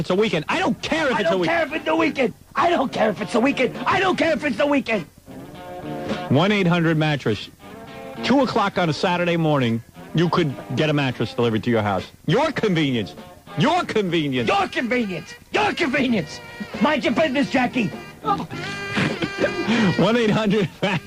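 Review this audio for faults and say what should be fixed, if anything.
Nothing stood out on listening, so there is nothing here that needs fixing.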